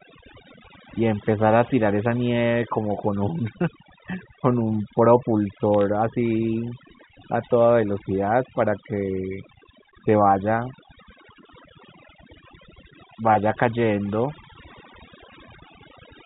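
Overdone noise removal runs throughout: an over-aggressive suppressor strips bands near its noise estimate, leaving near-silent gaps with twinkling specks. From 5.74 to 5.81 s, bit errors on a digital phone line flip individual A-law samples at roughly 0.15 percent, producing a brief burst of sharp ticks and crackle.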